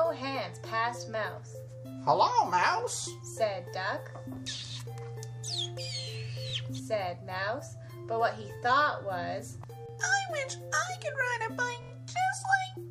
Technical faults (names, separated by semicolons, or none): repeated buffer